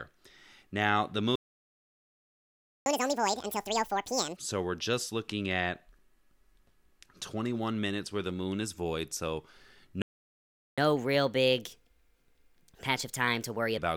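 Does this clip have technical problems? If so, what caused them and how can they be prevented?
Yes. The playback stall most likely comes from the player's buffer running dry, or its playback thread being blocked, so nothing reached the output until it recovered. The speech cuts out mid-flow and leaves dead air from 1.36 to 2.86 s, a gap of about 1.5 s, and again from 10.02 to 10.78 s, about 0.76 s, right after "moon is void so". Each time, the speech resumes where it broke off. A larger jitter buffer and a playback thread that is never starved or blocked would prevent these dropouts.

The catch-up at higher speed comes from the player resampling its backlog faster to regain the lost time, which raises speed and pitch together. After the first stall, from 2.86 to 4.37 s, the speech runs at double speed and sounds roughly 10 semitones higher until it settles just before "so we're just looking". 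After the second stall, from 10.78 to 13.78 s, it plays at 1.25 times speed, pitched up about 4 semitones. Using time-stretching that preserves pitch, or skipping ahead rather than speeding up, would avoid the chipmunk effect.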